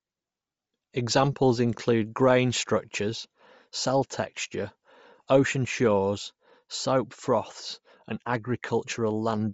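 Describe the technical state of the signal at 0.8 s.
At 0.8 s the speech carries plainly audible codec damage that runs through the whole clip: upper frequencies sound grainy and breathy rather than simply missing. This is likely Bluetooth LC3 compression, whose transform coder zeroes much of the top band at a bitrate that fits about 32 kbps and refills it with noise. Unlike a plain low-pass cut, the top band is still present but noisy, and the coder works in 7.5 ms frames rather than the longer blocks of MP3.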